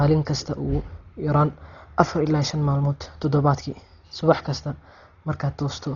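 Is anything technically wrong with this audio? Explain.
Yes. Likely Dolby Digital compression throughout: the speech is cut off above 6.9 kHz and sounds dull and rough, with fluttering noise filling starved frequency lines, as at roughly 32 kbps.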